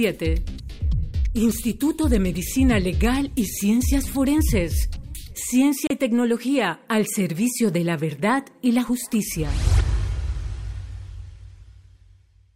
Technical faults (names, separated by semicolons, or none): digital broadcast dropout